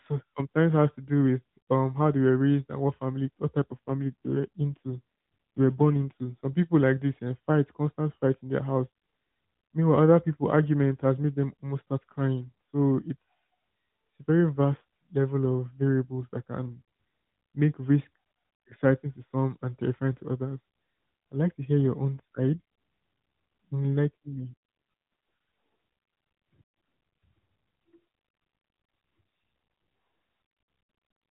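A speech clip carried over AMR narrowband mobile coding has two AMR rate drops, from 3.62 to 6.46 s and from 24.07 to 24.56 s. The voice turns buzzier and more synthetic, which fits a drop from 12.2 to about 5.9 kbps. Unlike packet loss or band-limiting, there is no gap and the 4 kHz band stays the same.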